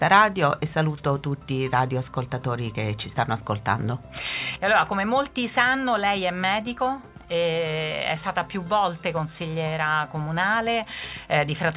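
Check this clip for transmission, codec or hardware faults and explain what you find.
No transmission, codec or hardware faults.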